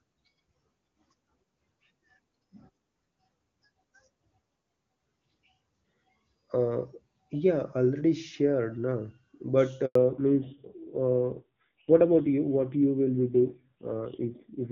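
A speech recording over a phone call, clear and wideband over HD Voice at first, carries two faults. At 9.85 s a handover gap silences the audio for 100 ms as the call switches networks and no speech frames arrive. From 9.95 s to the end, a fallback to narrowband removes everything above 4 kHz, leaving the sound duller and rougher, which fits a low-rate narrowband codec around 5.9 kbit/s.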